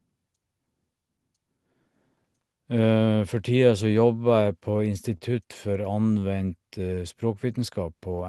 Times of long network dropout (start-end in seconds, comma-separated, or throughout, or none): none